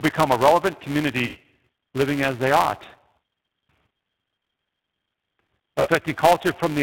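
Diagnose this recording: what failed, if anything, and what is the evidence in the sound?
Codec stage: G.729 codec damage throughout. Nothing passes above 4 kHz, and the speech sounds rough and synthetic. That fits an 8 kbit/s model-based coder.

Call processing: a filter restarted on every block. A steady 345 Hz buzz tracks the speech level. Each block starts with a small transient, which fits a 128-sample block.

Network: VoIP packet loss concealed by the speech codec. At 1.25 to 1.38 s and 5.80 to 5.90 s, speech is stretched into a buzzy tone or coloured noise that fades. That points to about 100 ms and 60 ms of missing packets.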